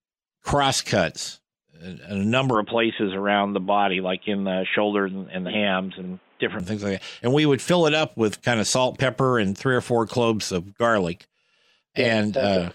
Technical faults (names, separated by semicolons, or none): input switched to a poorer device